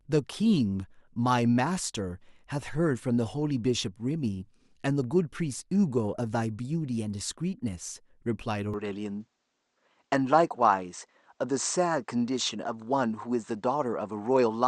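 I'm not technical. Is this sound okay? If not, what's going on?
No. From 8.74 s to the end, the speech turns duller, with nothing above 8.6 kHz, and faint new background noise appears. This is an input switched to a poorer device, likely a change to a narrower-band microphone, with no gap at the switch.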